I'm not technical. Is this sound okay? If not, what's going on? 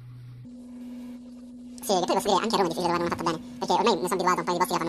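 No. From 0.45 s to the end, the speech plays twice as fast and a full octave higher. This is audio read two samples at a time (double speed): the player treats each pair of samples as one step, so the audio rushes.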